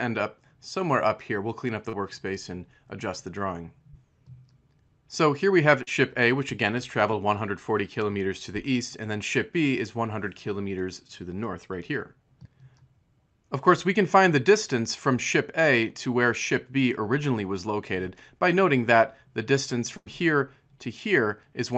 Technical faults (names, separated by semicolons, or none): short concealed packet loss; burst of packet loss